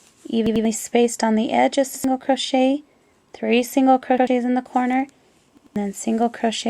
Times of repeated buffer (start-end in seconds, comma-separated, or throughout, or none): 0.46-0.65, 1.95-2.04, 4.18-4.27, 5.57-5.76